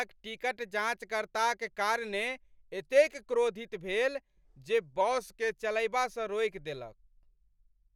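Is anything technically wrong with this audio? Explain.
Yes. Drift correction step, 5.01 to 5.58 s, after "भेल जे": the speech slows 5.86% and drops 105 cents, about a semitone, likely from clock-matching software stepping playback rate, then snaps back before "चलयबासँ रोकि देलक".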